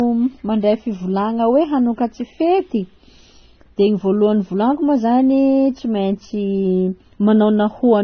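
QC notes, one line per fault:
Throughout, transcoding between lossy codecs: the speech was likely encoded twice, with the pattern fitting a low-rate HE-AAC pass followed by AAC-LC at a similar low rate, around 24 kbit/s. The second encoder spends its few bits re-coding the first one's smearing and adds its own swirly, watery quantisation noise. Both kinds of artefact sit together on the voice. Nothing is left above about 6.3 kHz, so sibilants sound dull and lisping.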